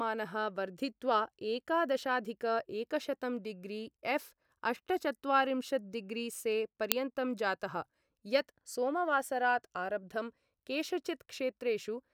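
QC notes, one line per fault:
6.92 s, uninitialised buffer: a single loud crack, under a millisecond long, where a block of about 32 samples was played before any speech had been written into it, so stale memory contents came out as sample values.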